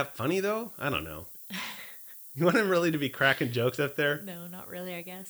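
Low bit depth with noise shaping runs throughout this speech clip: 8-bit rounding error is pushed upward, leaving a steady thin hiss, roughly 20 dB below the speech, brightest at the top.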